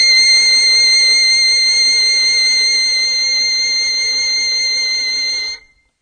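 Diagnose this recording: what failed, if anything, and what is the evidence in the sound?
The failure sits at the codec stage, with AAC compression present throughout. Nothing is heard above 9.6 kHz. Sustained notes warble or turn fizzy. That points to AAC-LC at a low bitrate, likely near 32 kbps, discarding detail to fit.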